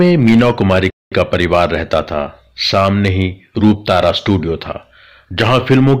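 Throughout the speech, the level arrives roughly 8 dB hotter than the signal chain can pass, so hard clipping shears the loudest peaks flat. Only a small share of the waveform is cut, but each flattened top adds high harmonics, heard as crackle riding on louder syllables.

At 0.9 s there is a playback stall, most likely the player running short of data or its thread being held up. Output drops to silence for about 214 ms, until 1.12 s, and the speech then resumes after that abrupt gap in mid-flow.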